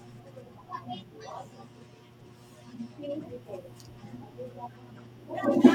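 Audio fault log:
5.44 s, bit error spike: a single sharp tick near the end of the speech, over almost instantly, with a bright, full-spectrum snap that has nothing to do with the voice around it. One sample's value has jumped away and straight back, the mark of a flipped bit in memory or on a digital link, which throws that sample off by a power of two. The spike peaks at about -29 dBFS.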